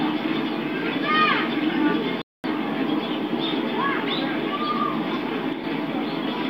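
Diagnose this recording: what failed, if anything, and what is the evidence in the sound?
A playback stall silences the output from 2.22 to 2.44 s, a gap of about 224 ms, after which the sound resumes. The stage is playback: the player most likely ran short of data or had its thread blocked, so nothing reached the output until it recovered. On the waveform this is a flat, silent stretch cutting off mid-flow. The spectrogram shows a clean vertical band of emptiness across all frequencies, with hard edges on both sides.

One channel drops out between 5.53 and 5.64 s, about 110 ms. Heard as a mono sum, content shared by both channels falls abruptly by about 6 dB, and anything present only in the missing side vanishes. The likely stage is the analogue wiring or the converter path briefly losing one leg of the stereo pair. The waveform shows a sudden step down in envelope and back. The spectrogram shows a uniform darkening across the band for that span rather than a gap.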